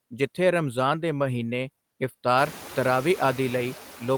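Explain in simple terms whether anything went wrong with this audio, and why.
Noise suppressor artifacts run through the whole speech clip. A noise suppressor keeps trimming the background noise between phrases and letting it back under the voice. So the noise pumps up and down. The room noise itself gets louder around 2.5 seconds; that is part of the recording, not a fault.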